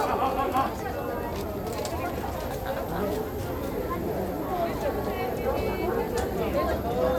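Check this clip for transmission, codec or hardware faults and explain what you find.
Nothing stood out on listening to this audio.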